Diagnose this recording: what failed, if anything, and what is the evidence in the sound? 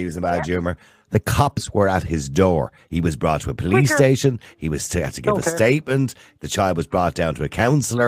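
The failure is at the network stage, recovered by the codec: a lost packet rebuilt from error correction at 1.45 to 1.51 s. The speech continues unbroken but turns briefly rougher and noisier for about 40 ms, which fits two lost packets replaced by the low-bitrate copies carried in the packets that followed. Ordinary concealment would instead smear or repeat the preceding sound.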